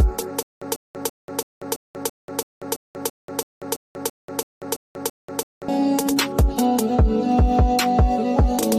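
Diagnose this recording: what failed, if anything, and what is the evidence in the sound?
From 0.43 s to 5.68 s the same short burst of sound, about 146 ms long, repeats fifteen times at an even pace of one every 334 ms. Each repeat is followed by about 188 ms of dead digital silence. This is a stutter with silent gaps. The stall most likely sits at the playback or stream buffer stage: on each retry the player replayed its last fragment and then ran dry, so the audio due in that span never arrived and is lost.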